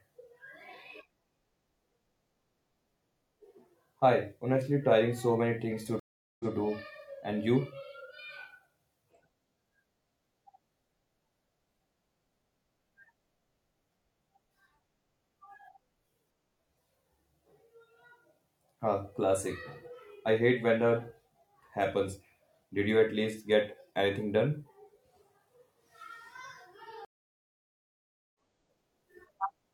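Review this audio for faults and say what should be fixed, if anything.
Stream reconnects cut the speech twice. At 6.00 to 6.53 s, 0.40 s of silence, then playback repeats 0.13 s. At 27.05 to 28.35 s, 1.30 s of silence, then about a second skipped. Both come from a dropped connection and a fresh decoder restart. Buffer more audio and resume from the exact byte position.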